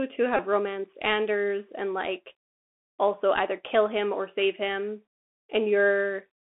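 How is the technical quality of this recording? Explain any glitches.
Poor. The speech is narrowband and gritty throughout, with one brief buzzing glitch near the start.

Throughout, the Bluetooth CVSD headset codec is clearly audible. Its one-bit, 64 kbps slope coding confines speech to roughly 250 Hz to 3.5 kHz, roughens sibilants and adds granular hiss.

From 0.37 to 0.42 s, a Bluetooth headset packet is repeated. About 19 ms of audio was lost, which fits roughly five dropped packets. Re-decoding the same packet every 3.75 ms gives a short buzz near 267 Hz.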